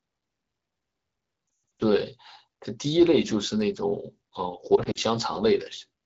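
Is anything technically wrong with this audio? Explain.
Yes, there are lost AMR speech frames at 1.80 to 1.82 s and 4.76 to 4.99 s. Radio errors corrupted frames, and the wideband decoder filled each gap by repeating the last good pitch and vocal tract settings with falling gain. The first burst sounds like about 200 ms of missing audio with a run near 120 ms, heard as a quick drop to near silence. The second is milder, about 80 ms in short gaps, giving quick dips and warble. The speech returns weak or rough.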